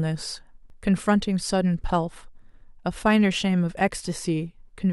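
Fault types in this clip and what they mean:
Repeated buffer: fresh audio did not reach the output in time, so the device played its last block again. In this speech clip that gives one click or brief buzz at 0.7 s. The repeat is short enough to fit a 10 ms buffer, and nothing seems lost around it.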